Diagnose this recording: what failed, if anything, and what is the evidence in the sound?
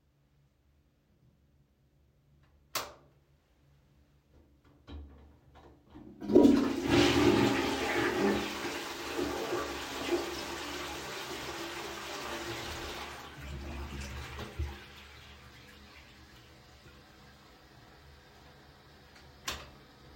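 No fault heard anywhere.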